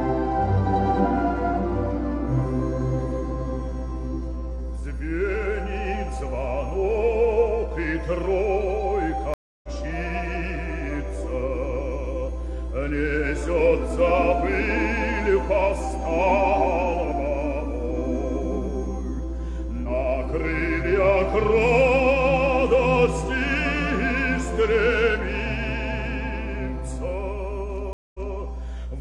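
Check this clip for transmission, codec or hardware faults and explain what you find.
Two faults are present: a mains hum under the whole clip, and two stream reconnects, one near 9.3 s and one near 27.9 s.

Mains hum runs throughout as a steady 60 Hz tone with low harmonics. It is strong, only roughly 5 dB below the wanted sound. It comes from a ground loop or nearby transformer letting the power line leak into the signal path. Unlike rumble or wind noise, its pitch never wanders and its level doesn't follow the programme. The 60 Hz fundamental marks it as mains-related.

The first stream reconnect runs from 9.34 to 9.69 s. The connection dropped, the audio went silent for 295 ms, and a new decoder picked the stream up again. Playback resumes about a fifth of a second further on, so material is skipped. The second runs from 27.93 to 28.38 s, with 213 ms of silence, and resumes 232 ms earlier, so a short stretch is heard twice. 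A plain dropout would pick up where it left off. Here the position jumps, and the restart is muted or fades in.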